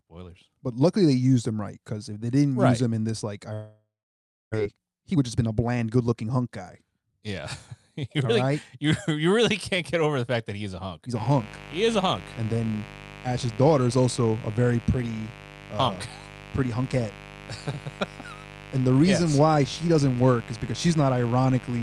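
Speech that breaks off at 3.53 s: the last sound is drawn out into a fading buzz, then about 0.63 s of silence follows until 4.56 s, and roughly 0.6 s of speech never returns. This is likely a long network dropout; unlike a clean edit, the concealment tail betrays the receiver guessing. From 4.61 to 7.23 s the speech runs about 12% fast, and again from 7.72 to 8.50 s at about 6%. This is a jitter buffer speed-up trimming short pitch-period pieces, roughly 0.3 s and then a few hundredths of a second, to cut the delay after the gap; pitch stays put, which separates it from a tape-style speed change. From 11.15 s to the end a mains buzz at 50 Hz sits about 20 dB below the speech. Its raspy, bright harmonics point to switching spikes from a dimmer or rectifier rather than a smooth, pure hum.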